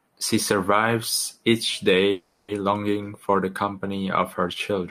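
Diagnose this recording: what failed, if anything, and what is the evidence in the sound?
Call audio freeze from 2.11 to 2.50 s: the speech stalls and the last sound is stretched into a fading buzz for about 370 ms, then resumes where it stopped with nothing lost. This points to a network stage, likely delayed packets draining the jitter buffer.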